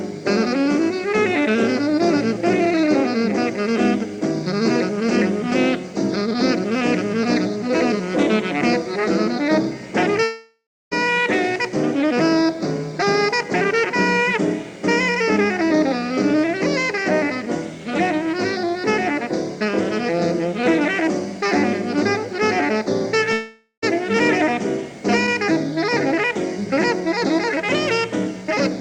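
At 10.23 to 10.93 s and 23.33 to 23.84 s, the sound smears into a fading buzz, then falls to near-silence for about 0.29 s and 0.1 s before resuming with material gone. This is likely a long network dropout: a decaying, featureless band on the spectrogram, then a flat gap in the waveform.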